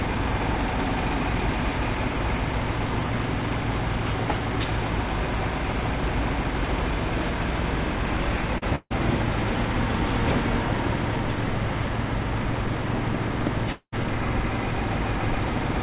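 At 8.58 s there is a short concealed packet loss, lasting to 8.64 s. About 40 ms of audio never arrived in time. The receiver patched the hole by extending the last sound for roughly 35 ms, then blended back into the real signal. The result is a brief smear or wobble rather than a clean gap.

From 8.76 s to 8.92 s comes a burst of packet loss. This time about 140 ms went missing in a row. The receiver again continued the last sound, stretching it across some 148 ms while turning it down. It becomes a held buzz or fading hiss, and about 50 ms of near silence follows. The audio then resumes further on, with the stretch in between lost.

At 13.72 s the sound drops out until 13.94 s. The last sound is extended and fades for about 199 ms, ending in roughly 80 ms of silence. When the audio returns, about 200 ms of it is missing. This is likely a long network dropout, with nothing reaching the receiver for that stretch.

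All of this plays through a telephone-band call path. Nothing is heard above 4 kHz, which fits a 64 kbps G.711 mu-law codec.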